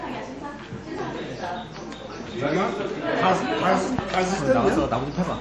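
From start to finish, the sound stops dead above 11.4 kHz and has a watery, swirly texture, with plainly audible damage. That's likely MP3 compression at a low bitrate, roughly 48 kbps: short of bits, the encoder chops off the treble and lets weak detail flicker in and out.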